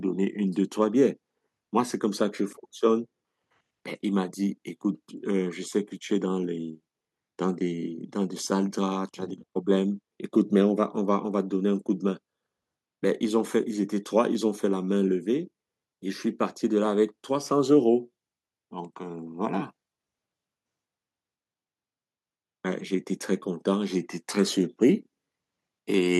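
No technical faults can be heard anywhere in the speech recording.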